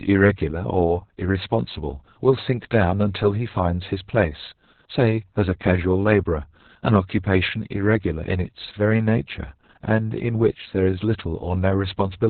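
From start to finish the speech carries Opus voice compression in its SILK mode, squeezed to narrowband: nothing survives above about 4.2 kHz, and the harsh, heavy damage points to a very low bitrate, around 6 kbps. The voice sounds muffled, but unlike a simple low-pass filter it is also hoarse and faintly robotic, because the coder rebuilds the excitation so coarsely that the natural buzz of the voice turns rough and synthetic.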